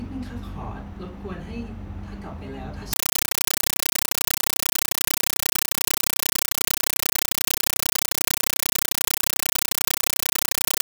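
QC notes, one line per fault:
2.93–10.86 s, compressed stream played as audio: from 2.93 s to the end, the speech is replaced by very loud, harsh chattering static. A Dolby Digital (AC-3) stream on the digital link is being treated as ordinary samples instead of being decoded. Each coded frame comes out as an 8 ms burst of noise followed by zero padding, repeating 31.25 times a second. That strict frame-rate pulse and its silent gaps set it apart from random noise, clipping or dropout crackle.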